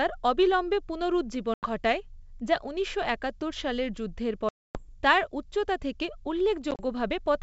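Around 1.54 to 1.70 s the wideband speech drops into a hard-edged silent gap of about 90 ms, which is packet loss on an ADPCM call. A longer hole of about 260 ms follows at 4.49 to 4.84 s, and at 6.71 to 6.81 s about 50 ms goes missing in short bursts, the longest 30 ms. Each time, the receiver's predictor and step size lose track of the sender's, so the speech comes back slightly distorted, and this settles within a few tens of milliseconds.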